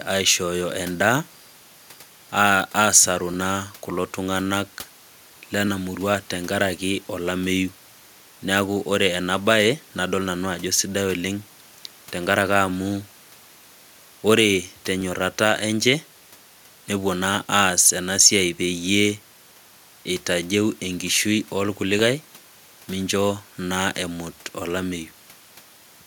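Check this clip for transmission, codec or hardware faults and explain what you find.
One fault is present: a click or pop recurs every 2.33 s through the speech, roughly ten times from 1.01 s to 24.32 s. This points to clock drift buffer slips. Two clocks likely disagree by a few hundred ppm, so a buffer periodically drops or repeats about 30 samples.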